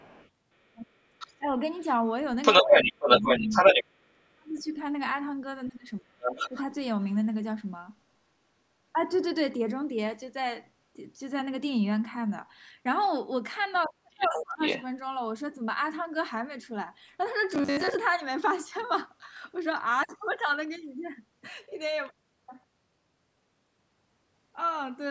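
Speech, with a second voice bleeding underneath it in four places: faintly, about 25 dB below the talker, from 0.0 to 1.86 s; then much stronger, about 10 dB above the talker, from 2.42 to 3.84 s; at roughly equal level from 6.21 to 6.62 s; and about 5 dB under from 13.83 to 14.84 s. This is the other side's voice leaking through, likely because the far end played on a loudspeaker and the echo canceller failed to scrub it from the microphone. Overlapping those same moments, the talker's own voice sinks and breaks up: by about 25 dB over roughly half a second between 0.73 and 1.57 s, by about 30 dB over around 1.5 s between 2.64 and 4.74 s, again by about 30 dB for about half a second between 5.67 and 6.53 s, and for about 0.7 s between 13.86 and 14.61 s. That is speech suppressed in double talk, likely the canceller mistaking simultaneous talk for echo and attenuating everything. From 17.50 to 17.97 s the voice hardens into a rigid, metallic drone at 93.8 Hz while still loosely tracking the speech, the robotic sound from repeated short buffers. 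Likely audio arrived too slowly and the player looped the last chunk to fill the gap, with roughly half the stretch made of repeats. The 93.8 Hz pitch fits a repeated block of about 10.7 ms. The call's microphone processing keeps the band up to 8 kHz.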